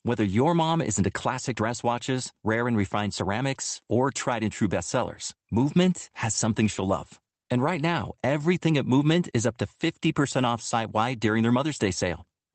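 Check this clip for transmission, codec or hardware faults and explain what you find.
Two related timing faults affect this speech clip, both from the sender's clock running ahead of the receiver's.

Clock drift between sender and receiver, throughout: the sender's clock runs about 4 percent fast, so the jitter buffer keeps overfilling and audio must be discarded.

Repeated timing corrections, 0.11 to 12.4 s: the receiver trims short pieces to keep pace, giving a 104 percent effective speed, heard, if at all, as slight hiccups and uneven tempo.

The call codec's coding noise and a high-frequency cut-off near 8 kHz, consistent with Opus, are also present.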